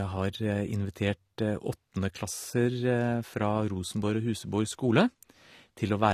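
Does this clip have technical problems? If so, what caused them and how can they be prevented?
Yes. Throughout, the speech sounds dull and smeared, with a watery, fizzy edge on sibilants and nothing above 14.1 kHz. That points to AAC compression, likely AAC-LC at a low bitrate around 32 kbps, where coarse quantisation and a lowered cut-off strip detail. Encoding at a higher bitrate, or keeping a lossless copy, prevents it.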